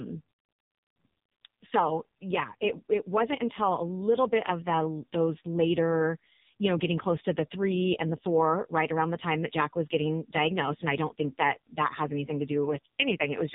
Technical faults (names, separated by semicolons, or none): AMR narrowband mobile codec